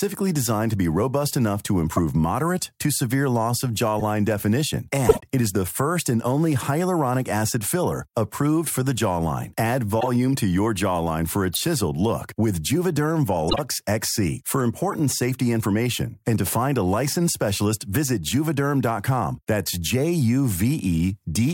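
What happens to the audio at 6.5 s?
Nothing goes wrong at 6.5 s; the speech continues intact through that moment, with no dropout, click or distortion.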